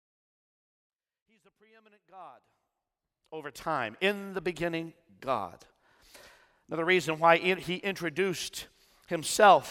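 No technical faults are audible.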